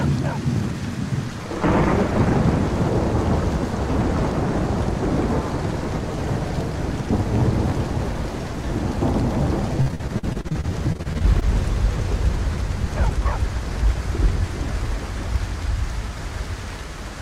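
The audio has two network-related faults. From 9.81 s to 11.46 s there is repeated packet loss with a robotic sound. The stretch turns choppy, with a rapid series of short holes, the longest about 48 ms. Each hole is bridged by extending the preceding sound, which accounts for about 442 ms of the span, while about 280 ms simply drops out. More than a quarter of this section is therefore concealed rather than real signal, and the closely spaced patches produce the mechanical character. From 13.38 s to 14.62 s a jitter buffer speed-up occurs. The audio runs at about 103 percent of normal rate with its pitch unchanged. The receiver, holding more buffered audio than its target, trimmed short pitch-period-length pieces repeatedly, removing roughly 40 ms in total to bring its delay back down.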